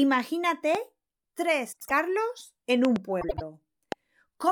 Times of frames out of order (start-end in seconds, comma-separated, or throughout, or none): 1.72-1.91, 3.21-3.42